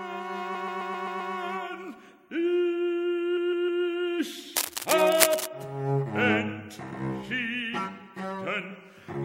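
The audio stutters twice from repeated frames. From 0.54 to 1.32 s a 130.6 ms block plays six extra times, adding about 0.78 s, which fits a run of five frames. From 3.36 to 3.83 s a 156.7 ms block repeats three extra times, adding 0.47 s. Unlike dropouts, the same content loops. From 4.56 to 5.47 s, cable scratch noise adds dense, irregular bursts roughly as loud as the sound itself, likely from a worn connector being moved. It sits over the audio without repeating any of it.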